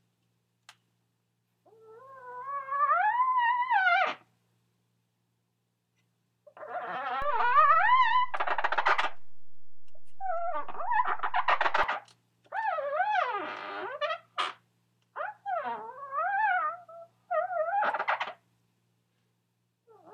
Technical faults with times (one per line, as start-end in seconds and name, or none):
7.22-11.83 DC step